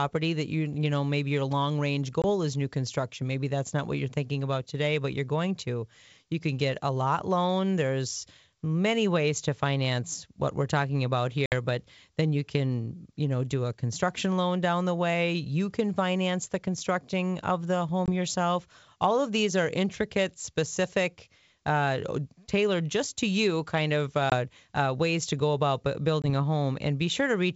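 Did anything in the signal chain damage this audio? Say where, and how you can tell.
Yes, network-stage packet loss on an ADPCM call, with hard-edged silent holes at 2.22, 18.06, 24.30 and 26.22 s (about 20 ms each) and 11.46 s (60 ms, roughly three packets). It differs from a plain dropout because the predictor is desynchronised, so the speech returns slightly distorted before settling.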